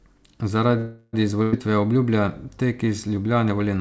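From 0.78 to 1.15 s the speech stalls into a fading buzz or hiss lasting about 350 ms, then picks up exactly where it stopped with nothing skipped. This is a call audio freeze, likely from packets delayed in transit until the jitter buffer ran dry.

At 1.43 s comes a burst of packet loss: roughly 100 ms of speech is gone. The receiver holds and fades the preceding sound for about 96 ms until 1.55 s, then resumes further along. The band stops at 8 kHz throughout, which fits G.722 at 64 kbps.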